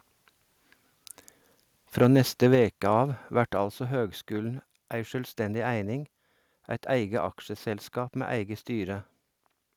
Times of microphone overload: 2.01-2.55

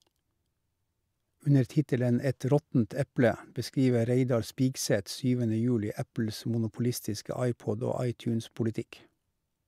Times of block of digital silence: none

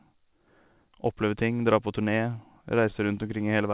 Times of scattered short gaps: 2.66-3.29

